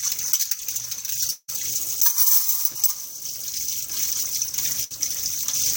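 A recording of sounds with two gaps in the audio stream. From 1.31 to 1.50 s the sound is carried on by an artificial continuation that decays over roughly 0.17 s into a brief stretch of near-silence, and about 180 ms of the original audio is missing when the sound resumes. This is likely a long network dropout: the receiver ran out of incoming data and extrapolated the last sound, then let it fade, before delivery restarted further along. At 4.84 to 4.92 s a shorter break occurs as a burst of packet loss. About 60 ms of audio never arrives in time. The receiver bridges the hole by extending and attenuating the preceding sound for roughly 60 ms, producing a short fading smear in place of the real content, and playback then jumps ahead with that segment absent.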